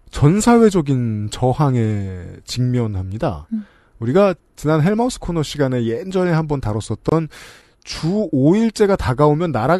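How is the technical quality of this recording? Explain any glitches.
One glitch stands out: a gap at a join of encoded pieces, from 7.09 to 7.12 s. A gap of about 25 ms cuts into the continuous speech. Separately encoded segments were joined untrimmed, leaving the encoder's start-up delay and final-frame padding in place, so the sound stops with smeared edges and then resumes where it left off.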